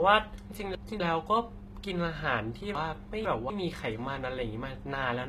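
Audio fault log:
Throughout: HE-AAC compression, likely the cause of the gritty, metallic treble across this speech; s sounds turn lispy and brittle. Nothing remains above about 14.9 kHz, and on a spectrogram the upper bands look like smeared copies of lower harmonics, misaligned at the crossover, which fits a low bitrate around 20 kbps.
0.5 to 1.0 s and 2.75 to 3.5 s: chunks out of order. In each span one quarter-second chunk plays late, arriving one and then two chunks past its place, so the sound jumbles briefly. The waveform shows three abrupt discontinuities per span, and the spectrogram shows vertical seams where unrelated segments meet.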